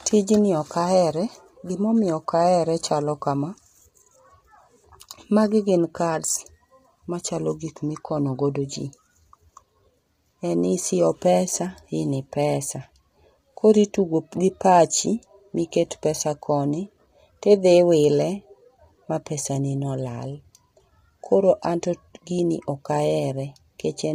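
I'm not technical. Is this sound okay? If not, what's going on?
No. From start to finish the speech sounds rough and grainy, with a hiss-like fizz caught between the tones of the voice and a top end that seems dulled or slightly artificial. This is most likely low-delay AAC compression, the kind video-call apps use to keep lag down. It works in very short slices of sound, which blur the voice's natural tones, and here it was squeezed hard enough to leave heavy damage.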